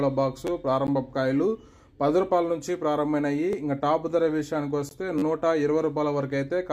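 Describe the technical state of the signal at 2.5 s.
At 2.5 s the signal is intact, with no audible dropout, distortion, glitch or other fault at that moment.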